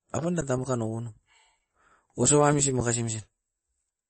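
A speech recording with two faults. Throughout, the encoder appears to have been starved of bits, so the sound was likely squeezed through MP3 compression at a rate that fits around 32 kbps. It discarded everything above 8.3 kHz and dropped weak frequency lines frame by frame. The result is clearly audible: a dull top end, a watery, swirling texture, smeared consonant onsets and metallic chirps on s sounds. At 0.41 s the output buffer briefly ran dry, an underrun with held sample. The converter froze on its last value for about 10 ms, flattening the waveform. Because essentially nothing was lost and playback picks up exactly where it paused, the sound halts for a moment and resumes with at most a faint click, heard as a tiny hitch.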